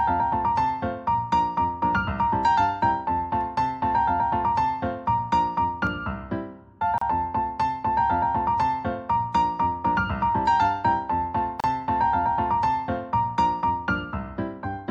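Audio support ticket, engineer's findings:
Gap at a join of encoded pieces, 6.98–7.01 s: about 34 ms dropout in continuous sound, smeared edges, sound resumes where it stopped. Second gap, 11.60–11.64 s, about 35 ms, same signature. Probable component: segment concatenation after encoding. Mechanism: pieces encoded separately, joined untrimmed; each encoder's start delay and final-frame padding left in as silence. Fix: trim encoder delay and padding, or encode as one continuous stream.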